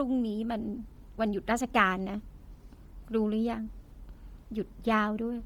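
Throughout the speech, the upper spectrum turns grainy and breathy, its detail replaced by shaped noise. This is likely heavy Bluetooth LC3 compression, fitting roughly 32 kbps with 10 ms frames. Unlike a plain low-pass cut, the band still extends to 20.2 kHz.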